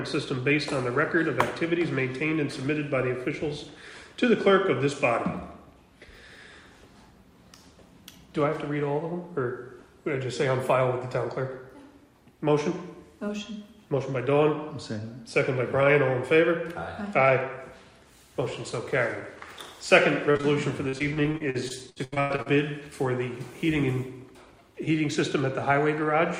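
At 20.31, 20.37 and 20.41 s comes a tight run of short concealed packet loss: about 40, 20 and 20 ms of audio arrived too late to decode. The receiver bridged each hole by extending the preceding sound, then crossfaded back. It is heard as a quick smear or wobble. Because three brief gaps cluster into about 0.13 s and then stop, it is distinct from the sustained pattern that follows.

From 20.89 to 22.48 s, repeated packet loss (robotic sound) sets in. More than a dozen gaps totalling about 520 ms fall across the 1.6 s stretch, so roughly a third of it is synthetic fill. The longest gap is 97 ms. Each patch continues the last sound before the next loss arrives, and the result is choppy audio with pieces missing. Unlike the isolated smears earlier, each hole here follows soon after the last.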